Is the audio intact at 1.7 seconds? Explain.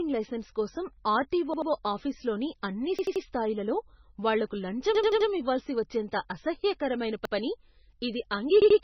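No. A repeated buffer runs from 1.54 to 1.71 s: fresh audio arrived late, so the same 85 ms slice, which fits a 4096-sample buffer, plays three times in a row with hard joins, heard as a stutter, though practically nothing is lost. The whole clip also has nothing above 6 kHz and heavy watery, swirly damage, likely from MP3 compression at roughly 18 kbps, where the encoder cuts the treble and drops weak frequency lines.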